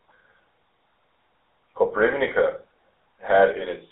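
GSM full-rate codec damage runs through the whole speech clip, from start to finish. The coder rebuilds speech from a vocal-tract filter excited by a sparse, evenly spaced pulse train, discarding much of the real excitation, which gives the plainly audible buzzy, gravelly roughness heard here. The band is squeezed to roughly 300 Hz to 3.7 kHz, so the sound is thin and boxy, a quality that fits the 13 kbps full-rate coder.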